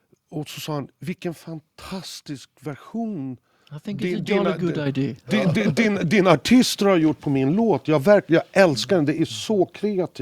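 It's a speech clip with the microphone volume stepped up twice: a jump of about 7 dB at 4.86 s, then about 3 dB more at 6.3 s, between "din din" and "har gjort på min". Voice and background rise together, so the device's input gain was raised, not the talker.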